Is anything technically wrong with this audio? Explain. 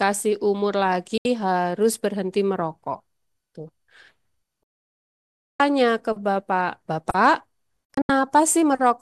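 Yes, the speech has three digital broadcast dropouts, at 1.18 to 1.26 s, 4.63 to 5.60 s, and 7.85 to 8.10 s. Each time the receiver stopped getting valid frames and muted until clean ones returned. The first hole is 72 ms, the second nearly a full second, and the third several short holes scattered over 240 ms. A 3 ms fade into true silence, with the missing speech simply gone rather than smeared or repeated, distinguishes this from packet-loss concealment.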